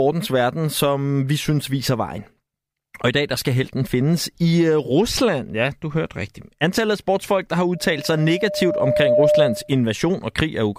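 Speech recording with loudspeaker feedback squeal from 7.74 to 9.74 s, just after "af sportsfolk der har": a 602 Hz tone swells over roughly a second and a half to around 5 dB above the speech, as the microphone re-amplifies its own loudspeaker.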